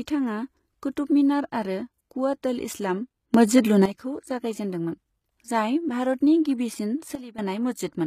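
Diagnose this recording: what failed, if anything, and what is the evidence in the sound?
The codec stage most likely used HE-AAC compression at a low bitrate near 20 kbps; replicated treble leaves s sounds plainly gritty and metallic throughout this speech.

A digital gain stage applied unramped changes, likely sudden gain jumps: level and background noise rise together by about 11 dB from 3.34 to 3.85 s, then drop about 12 dB from 7.15 to 7.38 s.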